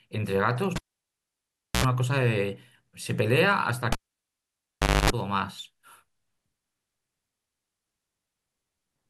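Cable pulled and plugged in at 0.76 s and 3.92 s: each time a pop cuts the speech to near silence for about 1.04 s, then 1.13 s, before mains buzz (75 ms at 60 Hz, then 260 ms at 50 Hz) leaks in as the plug's tip touches, and a second pop restores sound.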